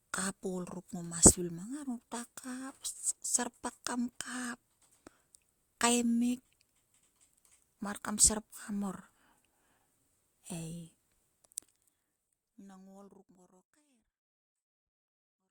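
No technical faults can be heard in the speech: the signal stays steady and intact, and the gradual fade-out that begins around 11 s and reaches silence at 15.5 s is an ordinary editing choice with no click or hard edge.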